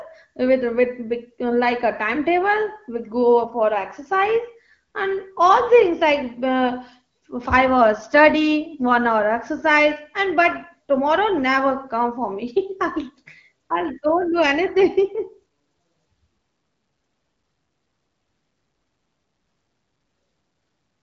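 No faults are audible; the speech carries only the light coding texture of AMR wideband at 12.65 kbit/s, with the band above 6.4 kHz filled in by shaped noise.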